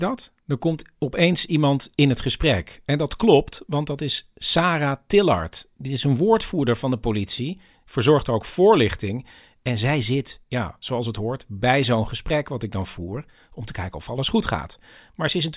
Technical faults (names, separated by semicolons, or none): none